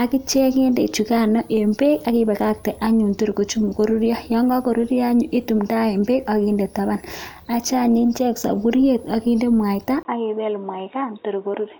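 At 10.03 s the speech drops out for about 20 ms, then returns dull and boxy until the end. Nothing above 3.8 kHz remains. The level falls by roughly 5 dB, and a new noise floor appears, about 40 dB down. The likely cause is an input switched to a poorer device.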